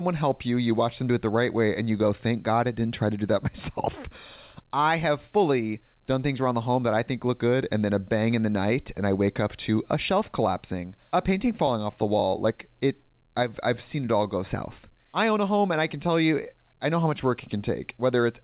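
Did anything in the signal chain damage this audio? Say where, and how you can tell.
No, nothing in the signal chain damaged this audio; the call path simply limits it to narrowband telephone quality, with nothing above 4 kHz, which fits a G.711 A-law codec.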